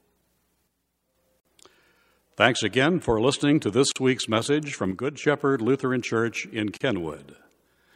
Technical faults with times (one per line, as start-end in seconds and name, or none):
0.67-1.15 one channel drops out
1.40-1.45 gap at a join of encoded pieces
3.92-3.96 gap at a join of encoded pieces
4.91-5.24 one channel drops out
6.77-6.81 gap at a join of encoded pieces